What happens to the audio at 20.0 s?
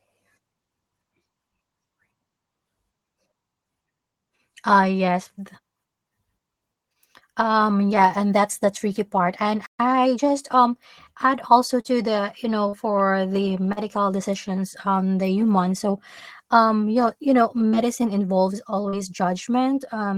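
Nothing goes wrong at 20.0 s: the speech carries on intact through that moment, with no dropout, click or distortion to be heard.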